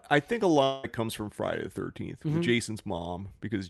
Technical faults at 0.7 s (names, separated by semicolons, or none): long network dropout